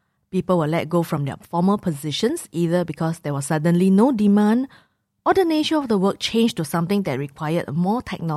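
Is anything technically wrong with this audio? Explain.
No, there are no faults.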